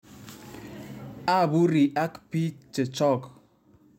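No technical faults can be heard anywhere in this speech clip.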